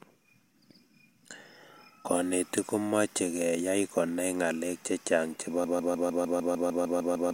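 At 5.64 s the speech locks into a broken-record loop: a 0.15 s fragment repeats exactly, back to back, 11 times until the clip ends. The likely cause is a stalled player or stream resending its last buffered piece, so the following speech is lost.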